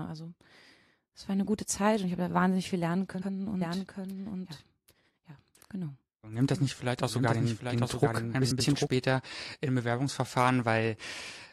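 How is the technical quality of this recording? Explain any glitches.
The recording has two audible faults: frames out of order at two points, and a doubled audio track through the middle of the speech.

Frames out of order, at 3.14 to 3.29 s and 8.41 to 8.61 s: two adjacent runs of frames were decoded in swapped order, so each stretch plays with its halves exchanged. The runs are about 70 ms and 93 ms long, which fits three and four frames of roughly 23 ms. Each stretch comes out as a garbled flutter, and no time is lost.

Doubled audio track, from 3.61 to 8.87 s: a second full-band copy of the speech runs about 0.7 s behind the original and about 5 dB quieter. The likely cause is the same signal being captured again through a slower path and mixed back in. The copy has no reverberant tail or room colouring, unlike a natural echo, and it cuts in and out abruptly at both ends.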